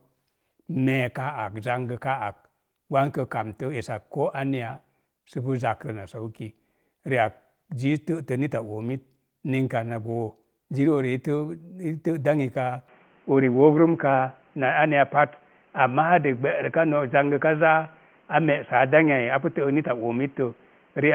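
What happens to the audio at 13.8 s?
At 13.8 s the speech is in the narrowband section that starts at 12.88 s and runs to the end. Everything above 3.3 kHz is gone, so the sound turns dull and boxy. The level shifts a little, and a faint new background noise appears well below the speech. The change happens with no gap. This is likely an input switched to a poorer device, such as a headset's call profile with a narrower band and its own noise.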